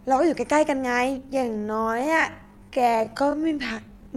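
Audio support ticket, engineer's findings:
Time-stretched section from 1.17 s to end of clip. Sudden drop in pace, pitch unchanged; speech slowed to about 0.55x. Likely cause: time-stretch stage padding duration by repeating short segments while holding pitch.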